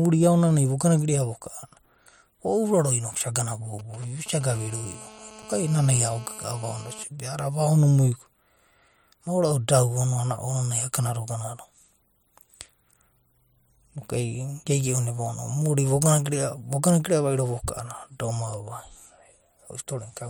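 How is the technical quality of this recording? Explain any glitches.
Two bursts of mobile-phone interference cut across the speech between 3.79 and 7.04 s.

GSM signalling bursts, 3.79 to 4.51 s, just after "isa gana": a nearby 2G handset exchanges short radio bursts with the network, and the audio circuitry rectifies them. They come through as a galloping dit-dit-dit of brief buzzes at a 216.7 Hz rate, roughly 20 dB below the speech.

GSM phone buzz, 4.51 to 7.04 s: the same handset moves into a call and transmits continuously in 216.7 Hz bursts, which the circuitry again demodulates. The result is a steady, harsh, harmonic-rich rasp about 21 dB below the speech, unrelated to anything being said.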